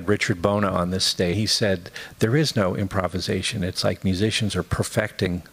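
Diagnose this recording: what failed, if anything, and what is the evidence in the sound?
Codec stage: damaged data in the compressed stream. Faults at 1.33–1.35 s and 5.23–5.27 s mark misread frames and a resync.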